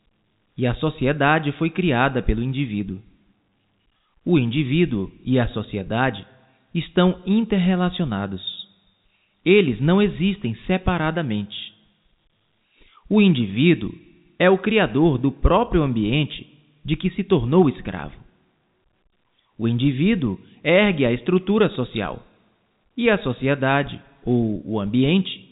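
No technical faults can be heard in this speech clip, which carries the narrow band of G.711 telephone coding, with nothing above about 3.8 kHz.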